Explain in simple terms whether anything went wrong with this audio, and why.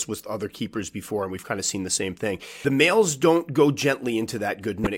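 Two brief glitches break into the speech: a short one from 2.62 to 2.65 s, right after "seen the same thing" and before "males don't go", and another from 4.84 to 4.87 s near the end. Both come from damaged data in a compressed stream. A small piece of the compressed file was corrupted, so the decoder couldn't read those frames properly, lost its place for a moment and had to find the next valid frame before playback continued.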